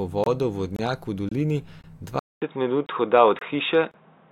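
A gap between chunks recurs at 0.24, 0.76, 1.29 and 1.81 s: 25 ms hard-edged silences after each half-second chunk, visible as blank vertical stripes and flat waveform segments.

At 2.19 s the input is likely switched to a poorer device. A 200 ms silence precedes duller, boxier sound, about 5 dB different in level, with a faint new noise floor. The spectrogram shows nothing above 3.8 kHz.

The gaps between chunks continue at 2.34, 2.86, 3.39 and 3.91 s.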